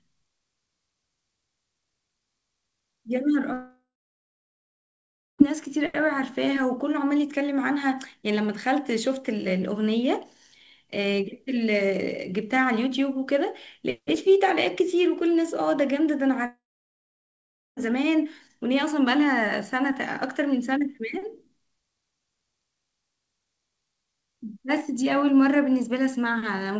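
From 3.53 to 5.42 s the speech trails into a short fading buzz, then about 1.5 s of near silence, and resumes with a stretch missing. The same happens from 16.46 to 17.80 s, with about 1.2 s silent. Each is likely a long network dropout: packets stopped arriving, so the receiver briefly stretched the last sound, then fell silent.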